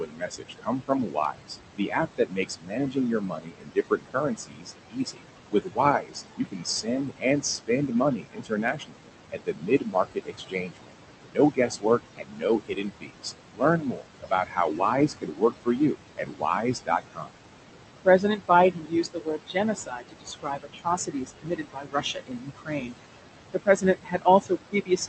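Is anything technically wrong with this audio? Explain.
Yes, there are two related faults, both from noise suppression working hard against room noise that sits only about 8 dB below the speech.

Noise suppressor artifacts run through the whole clip. The suppressor treats the steady background as noise and pulls it down by about 20 dB in each frequency band, frame by frame. Between phrases the noise drops away, and under the speech it comes back up, leaving a warbling, fluttery residue and a thin, watery edge on the voice. On a spectrogram the noise floor looks patchy, with isolated flickering time-frequency specks instead of an even wash. In the waveform the gaps between phrases sit near silence, while the noise returns as the speech resumes.

Speech cut by the noise suppressor happens in three spans: 0.0 to 10.95 s, 11.26 to 17.36 s, and 18.05 s to the end at 25.1 s. The suppressor mistakes low-level parts of the speech for noise and turns them down with the background, by up to about 22 dB in the first two spans and about 21 dB in the last. 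Roughly seven seconds of the first span and about three seconds of the second are affected. Soft consonants, word endings and quieter stretches sound swallowed or faint. A spectrogram shows these as abrupt holes where weak high-frequency consonant energy and decaying tails vanish. In the waveform, syllable edges look chopped and envelopes fall off too early.

The call path itself sounds as expected. Its content stops at about 8 kHz, a band limit that fits Opus at a moderate bitrate.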